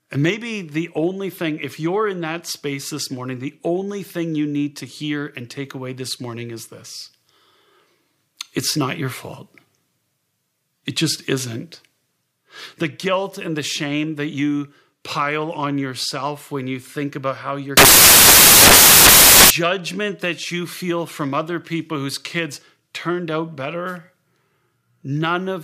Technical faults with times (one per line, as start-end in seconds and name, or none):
17.77-19.50 samples built from the wrong bytes